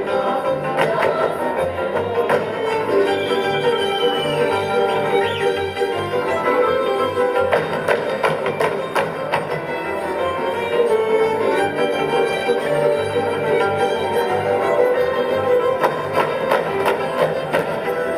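Nothing stood out as a technical problem on listening.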